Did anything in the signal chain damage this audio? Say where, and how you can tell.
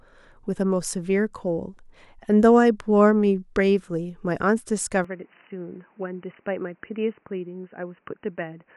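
Yes. At 5.04 s the speech turns boxy, loses everything above 3 kHz, drops about 5 dB and gains new background noise roughly 35 dB down. That is likely the input switched to a poorer device at the driver stage. A spectrogram shows the top band ending abruptly there, and the waveform steps down.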